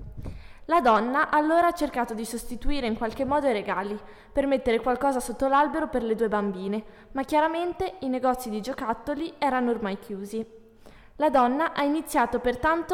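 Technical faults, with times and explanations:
No technical faults are audible.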